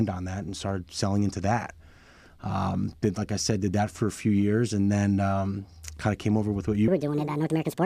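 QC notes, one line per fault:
6.88 to 7.86 s, section at the wrong speed: the final stretch was likely replayed against the wrong clock, running at 1.53 times its recorded rate, so the speech becomes hurried and rises about seven semitones, tempo and pitch shifting together until the clip ends.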